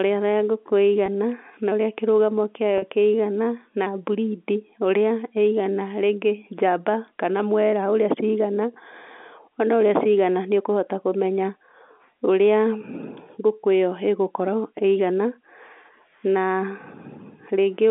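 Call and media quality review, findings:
Brief buzzy hold at 1.06–1.08 s and 2.78–2.82 s, the second about 40 ms against 20 ms. Packet loss with pitch repetition: receiver concealment replaying the last pitch period, consistent with one then two lost 20 ms packets, over a 250 Hz–3.5 kHz G.711 A-law line.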